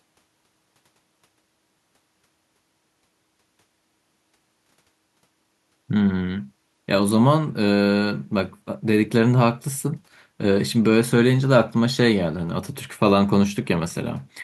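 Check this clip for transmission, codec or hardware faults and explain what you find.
No faults found in the speech; nothing here needs attention.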